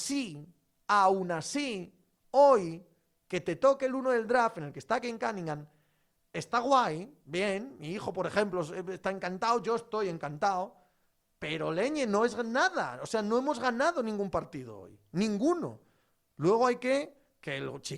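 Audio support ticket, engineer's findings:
No faults found on review.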